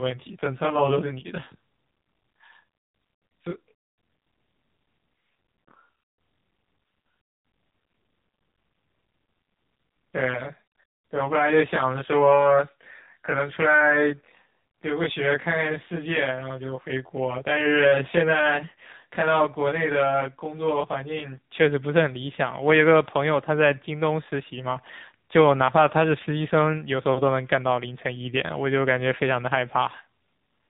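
It's a speech recording, and the whole thing has been through an AMR narrowband mobile codec (AMR-NB). Nothing gets through above about 3.8 kHz, so it has that boxed-in phone-line sound. The codec damage is plainly audible too: a buzzy, synthetic edge that fits a low bitrate around 7.4 kbps. At that rate the encoder's vocal-tract model and sparse pulse excitation can't keep up with the detail.

On top of that, from the start to 21.49 s there's channel delay comb filtering. One channel runs late by something like 20 ms, and when the two are folded to mono, whatever they share cancels at evenly spaced frequencies. The first notch sits down at a few tens of hertz and the rest repeat closely up the spectrum, which gives that rough, slightly doubled sound until it clears at 21.49 s.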